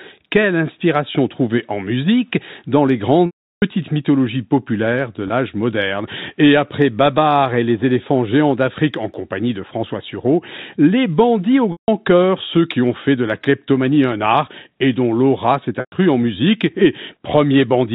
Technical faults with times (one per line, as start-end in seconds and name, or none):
3.26-3.62 packet loss with pitch repetition
5.28-5.30 packet loss with pitch repetition
11.72-11.88 packet loss with pitch repetition
15.80-15.92 packet loss with pitch repetition